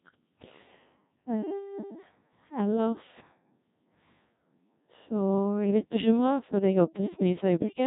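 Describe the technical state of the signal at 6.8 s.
At 6.8 s the speech remains under the Codec 2 vocoder that spans the whole clip. It is resynthesised from sine waves, sounding robotic and buzzy, cut off above 3.8 kHz, consistent with roughly 1.6 kbit/s.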